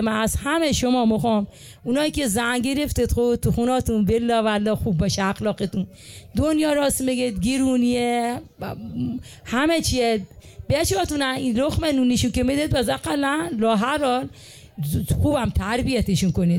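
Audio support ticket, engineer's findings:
No audible faults found.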